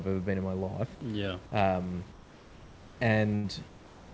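From 2.12 to 2.99 s, and again from 3.68 s to the end, the room background gives way to steady, featureless noise about 3 dB quieter, likely comfort noise in place of the background during discontinuous transmission. At 3.35 to 3.47 s, a burst of packet loss is concealed by a fading extension of the preceding sound, and about 90 ms is skipped.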